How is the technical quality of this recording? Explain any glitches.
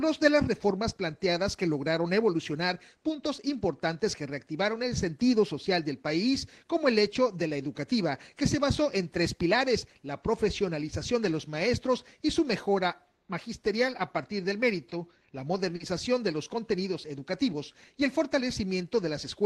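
Two brief glitches: short stalls from a late packet at 14.89–15.03 s and 15.76–15.83 s. The jitter buffer briefly ran dry, so the receiver held the last sound for 20 ms, then 40 ms, before resuming without loss. Each shows as a slight hold with a buzz or dip: a smeared horizontal streak on a spectrogram, and a repeating cycle in the waveform.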